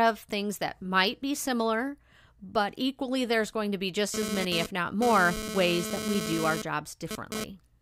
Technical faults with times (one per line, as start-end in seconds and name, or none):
4.14-7.44 GSM phone buzz